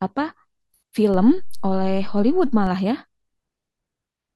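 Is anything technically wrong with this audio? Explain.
Yes. A DC step occurs at 1.14 s: the waveform's zero line jumps to an offset of about -22 dBFS, holds there, and returns at 2.67 s. A shift like this comes from a converter recalibrating or an input carrying an offset being switched in. Each edge sounds as a low thump or click while the speech continues unchanged. On a waveform, the trace sits visibly off-centre between those times. A spectrogram shows a brief broadband, low-heavy line at each transition.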